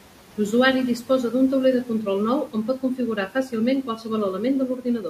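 At 3.16 to 3.53 s, 3.83 to 4.1 s and 4.68 to 5.05 s, the noise suppressor cuts speech. It mistakes quiet speech for noise and lowers it by about 11 to 12 dB. Those parts sound swallowed and faint.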